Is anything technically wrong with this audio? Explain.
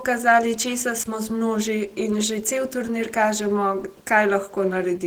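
Yes. Opus voice compression runs throughout the speech, from start to finish. A hybrid coder splits the signal, coding the band below 8 kHz with linear prediction and the range above with a transform layer. The audio still reaches about 20.2 kHz, but the coarsely coded excitation, which fits roughly 16 kbps, leaves the speech plainly hoarse and slightly robotic.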